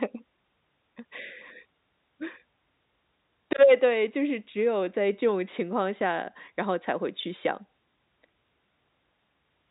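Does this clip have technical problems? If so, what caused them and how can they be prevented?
No technical problems here.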